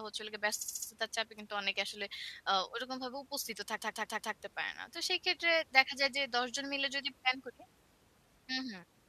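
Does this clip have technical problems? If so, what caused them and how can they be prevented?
Yes, the speech has repeated frames. From 0.61 to 0.88 s a 69.7 ms block plays four extra times, and from 3.76 to 4.32 s a 139.3 ms block does the same. This adds 0.28 s and 0.56 s of stutter. The short block fits a run of three compressed frames. On a spectrogram each stretch shows identical tiled segments. Writing each frame once, with sequence checks on transmission, prevents it.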